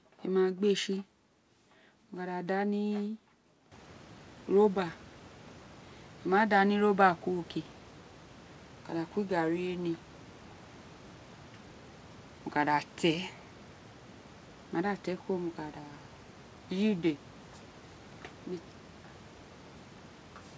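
Nothing goes wrong technically here: the room's background noise lifts by about 19 dB at around three and a half seconds but still sits about 26 dB under the speech, and the call path carries nothing above 8 kHz, which is simply the upper limit of the G.722 codec it runs through.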